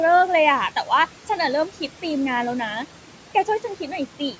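Throughout the speech there are noise suppressor artifacts. The room noise, about 18 dB below the speech, is pushed down by about 12 dB between phrases and swells back under them.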